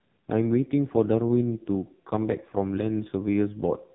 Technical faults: AMR narrowband mobile codec

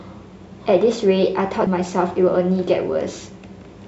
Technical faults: CD skip

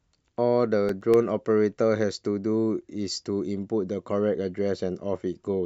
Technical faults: CD scratch ticks

